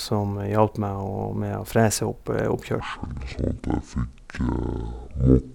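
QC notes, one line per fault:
2.80 to 5.54 s, section at the wrong speed: from 2.80 s to the end, the speech plays at 0.549 times its recorded speed. It sounds deep and slow, about ten semitones lower. Pitch and pace fall together, likely from playback against the wrong clock.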